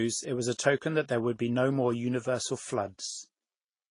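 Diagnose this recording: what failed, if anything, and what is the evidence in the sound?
Transcoding between lossy codecs, at the codec stage, runs throughout the speech. Nothing remains above 10.6 kHz, and two kinds of coding artefacts are heard together, likely from a low-rate MP3 re-encoded as lower-rate Vorbis that spent bits on the MP3's artefacts.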